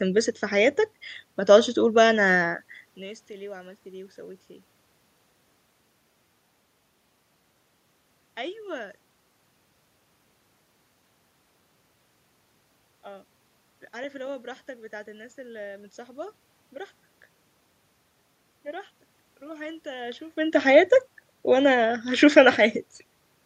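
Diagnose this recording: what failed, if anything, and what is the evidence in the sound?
Nothing in the chain has failed: the steady background is the room itself, and the level shifts around 2.5 s and 20 s are the talker moving relative to the microphone.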